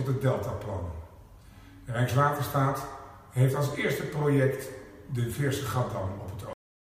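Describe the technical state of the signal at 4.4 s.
Nothing goes wrong with the signal at 4.4 s; the audio is intact there.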